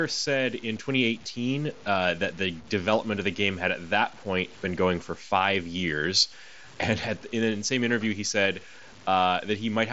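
Throughout the speech, the sound is grainy in a way that rises and falls with the signal, and quiet stretches sputter or drop out. This is likely low bit depth without dither, fitting about 7-bit truncation, with error roughly 25 dB below the signal. The waveform shows visible stair-steps, and the spectrogram shows signal-tracking hash spreading up to the 7.7 kHz ceiling of the Bluetooth mSBC band.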